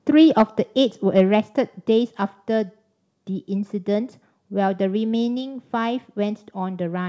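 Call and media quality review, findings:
Microphone overload, 0.39–0.42 s and 1.17–1.21 s: harsh crackle on loudest peaks, about 4 dB then about 1 dB over full scale. Likely mic input gain set too high. Waveform shows flat-topped peaks (around 7% and 5% of samples); spectrogram shows broadband splatter.

Microphone volume stepped down, 0.42 s: voice and background drop together, about 3 dB, immediately after first overload. Likely call software's automatic gain control cutting device input level in one step. Waveform envelope shows an abrupt step; spectrogram shows uniform darkening across the band, which stops at 8 kHz on the G.722 path.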